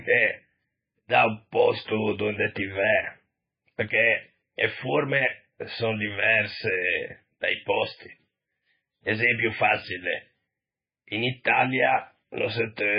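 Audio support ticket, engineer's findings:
Speech watery and swirly throughout, nothing above 5.1 kHz. Likely MP3 compression at a starved bitrate, around 16 kbps: treble cut, weak frequency lines flickering between frames.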